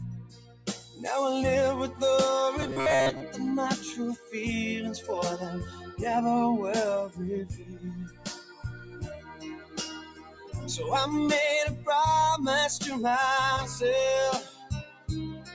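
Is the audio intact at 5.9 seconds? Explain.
No. At 5.9 seconds the audio sits inside a span from 5.62 to 6.0 s where the sound was cut by the noise suppressor. The suppressor mistook this stretch for noise and pulled it down harder than its surroundings, by about 10 dB at the deepest point. The loss lasts roughly 400 ms. A steady or decaying part sinks and its tail is clipped short. Any sharp onset survives better.

That dip belongs to a wider problem that runs through the whole clip. A noise suppressor built for speech was left on while non-speech sound passed through it. It treats sustained tones, ambience and reverberant tails as noise. Its gain keeps swinging, by something like 15 dB. Held sound and decays get pushed down while attacks slip through. At 5.9 seconds this makes the level pump and the sound thin out.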